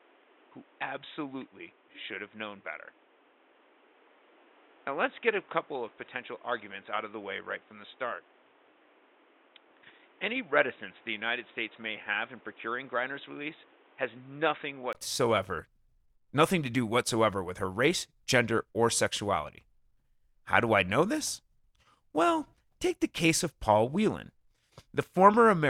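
From the start to 14.95 s the speech is dull and boxy, with nothing above 3.8 kHz. It sits about 10 dB quieter over a noise floor roughly 30 dB down. At 14.95 s a gap of 20 ms precedes full-band sound. The cause is likely an input switched to a poorer device. A plain filter or codec bandwidth drop would narrow the band alone, but here tone, level and background noise all change together, with a brief gap at the switch.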